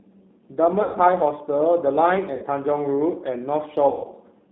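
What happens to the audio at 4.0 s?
From 3.89 to 4.08 s, VoIP packet loss concealed by the speech codec replaces about 150 ms of lost audio: the decoder extends its last pitch and filter with falling gain, giving a fading buzzy tone or coloured noise. Underneath, the G.729 codec limits the line to 200 Hz to 3.7 kHz at 8 kbit/s, leaving the audio plainly rough and synthetic.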